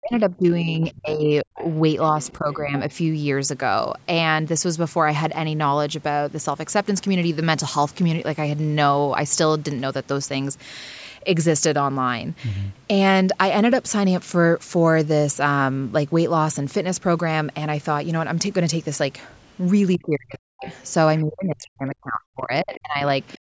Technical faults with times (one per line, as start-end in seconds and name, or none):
0.00-2.75 speech suppressed in double talk
1.56-2.93 other side's voice leaking through
19.94-20.06 other side's voice leaking through
19.96-20.68 speech suppressed in double talk
20.64-21.21 other side's voice leaking through
21.22-23.45 speech suppressed in double talk
22.74-22.78 other side's voice leaking through
23.32-23.38 other side's voice leaking through